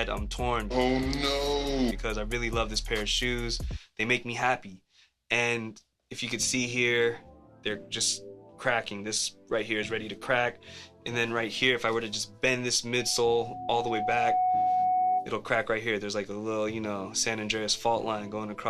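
A single steady tone near 736 Hz swells up over roughly a second and a half from 12.93 s and holds until 15.34 s, ending up about 5 dB louder than the surrounding audio. This is loudspeaker feedback squeal: the microphone is hearing its own loudspeaker, and at that frequency the loop gain exceeds one, so the tone keeps feeding itself.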